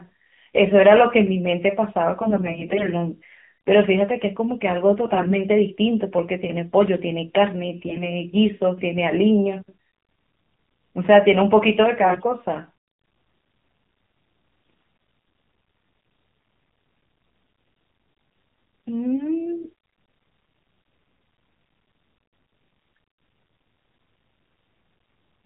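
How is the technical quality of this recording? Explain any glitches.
The recording is speech carried over a narrowband mobile link, with a constant band limit and synthetic colouring plus six short bursts of corrupted frames.

Throughout, the AMR narrowband mobile codec is plainly audible. Nothing above 4 kHz survives, so the speech sounds thin and telephone-like. At this low rate, the vocal-tract model is fed by only a sparse set of pulses per frame, which leaves a buzzy, somewhat artificial texture on voiced sounds. The degree of buzz fits a low AMR-NB mode of around 7.4 kbps.

AMR bit errors appear at 2.22–2.87 s, 5.06–5.34 s, 7.86–8.05 s, 12.02–12.27 s, 14.64–14.90 s and 19.62–19.72 s. In each stretch, frames arrived with some of their lightly protected bits flipped while the core checksum still passed, so the decoder used them. Misplaced excitation pulses and slightly wrong gain and spectral values make the speech hoarse, scratchy and gargly, though pitch and level stay roughly intact. 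The burst at 7.86–8.05 s has the heaviest error rate, roughly 15 percent.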